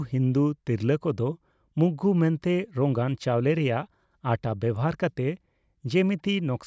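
No technical faults can be heard anywhere in the speech recording.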